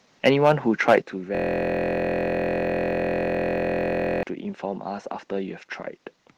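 At 0.88 s a short burst of harsh, crackly distortion lands on a loud peak and lasts until about 0.98 s. The tops of the waveform are flattened, with a noticeable share of samples pinned at the converter's limit and the peak pushing roughly 8 dB past what the converter can hold. This is microphone overload, likely caused by the input volume being set too high, so the loudest moment simply ran out of headroom.

Right after that distorted peak, at 1.02 s, the whole level drops abruptly by about 6 dB, background included, in a single step rather than a fade. This sounds like the microphone volume being stepped down, likely by the call software reacting to the clipping it had just detected and cutting the device's input gain in one move to prevent further overload.

From 1.35 s to 4.23 s the sound is replaced by a steady, mechanical buzz at about 43 Hz. A 23.22 ms fragment repeats exactly, well over a hundred times in a row, with nothing new getting through. 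That is a system hang loop: the computer or driver stalled while the audio hardware kept replaying the same ring buffer, and a loop of that length fits a 1024-sample buffer. The call path's Opus coding, which stops the top end at around 12 kHz, applies across the clip.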